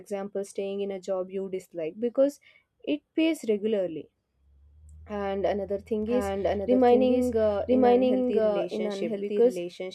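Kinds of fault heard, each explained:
Doubled audio track: likely a slower second capture path, so from 6.03 s an undecayed copy of the speech trails about a second behind, at near-equal level.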